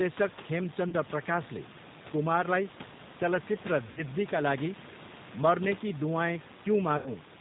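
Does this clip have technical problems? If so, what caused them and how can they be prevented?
Yes. The whole clip has gone through the G.729 codec, here at 8 kbit/s, and the damage is plainly audible. It rebuilds the speech from a vocal tract filter and a pitch predictor plus a handful of pulses per frame, so everything above 4 kHz is gone and the speech has that slightly rough, synthetic edge. The room noise sitting about 18 dB below the speech picks up a bit of warble too. To avoid this, use a wideband codec like G.722 or Opus when the link can carry it.

There's also VoIP packet loss concealed by the speech codec, in three places. At 0.89 to 0.95 s, right before "प्रकाशले कुमारलाई चलचित्र", about 30 ms went missing, which fits a single lost packet. At 3.91 to 4.03 s, just after "प्रकाशले कुमारलाई चलचित्र", around 60 ms was lost, and at 6.97 to 7.12 s around 90 ms. In each gap the decoder stretched its last pitch and filter into a buzzy tone or a coloured noise that fades, and the speech stays weak or distorted for tens of milliseconds after real packets come back. 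To prevent it, fix the network loss, or add a jitter buffer with forward error correction or packet redundancy.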